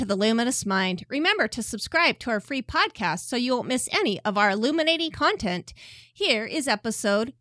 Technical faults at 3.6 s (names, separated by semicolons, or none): none